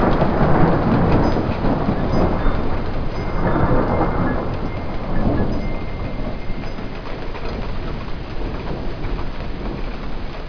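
Aliasing runs throughout the clip: the sound was downsampled, which fits a drop from 48 kHz to 11 kHz, with no anti-alias filter, so content above 5.5 kHz folds back as unrelated tones roughly 25 dB down, making the top end gritty and metallic.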